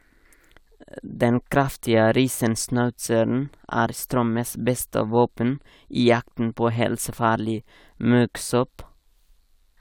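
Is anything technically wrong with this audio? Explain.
No, nothing technically wrong can be heard here.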